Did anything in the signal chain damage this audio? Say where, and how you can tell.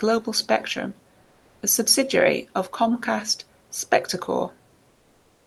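Yes: comfort noise in place of the background at 1.23–1.61 s and 4.89–5.46 s. Featureless hiss, about 2 dB up then down, likely Opus DTX at the codec.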